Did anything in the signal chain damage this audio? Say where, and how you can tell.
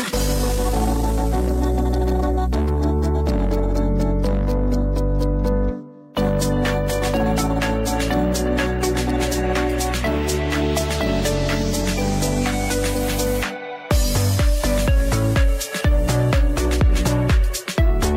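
Yes. A time-stretched section runs from 0.0 to 2.88 s. This opening stretch plays about 1.62 times faster than the rest while its pitch stays put, and it sounds rushed until the pace drops abruptly to normal at 2.88 s. The likely cause is time-compression software applied before storage or playback. It keeps the pitch by cutting out short slices of the waveform and joining what remains.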